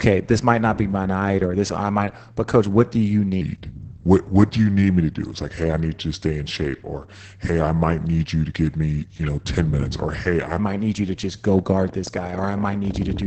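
It's a short speech clip, and the whole thing has been through Opus voice compression at a very low rate. The band stops around 8 kHz, so everything sounds muffled, and the coarse SILK excitation coding gives the voice a hoarse, slightly robotic edge. The heavy damage points to something around 10 kbps in voice mode with 20 ms frames. From 3.41 s, right after "coach what do you", to 10.59 s, just before "might need you to", there's a section at the wrong speed. It plays at 0.827 times normal, so it's slower, and the pitch drops by roughly three semitones along with it. The voice goes noticeably deeper and more drawn out, then snaps back to normal pace afterwards. The likely cause is that stretch being played or resampled against the wrong clock. Then from 11.59 s, after "you to just go", a train of clicks runs all the way to the end at 13.26 s. That's about 13.2 pops per second at an uneven spacing, and they peak at roughly the same level as the speech, so they sit right on top of it rather than hiding underneath. 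Similar-shaped pulses at that sort of rate most likely come from electrical interference or a faulty connection or power supply.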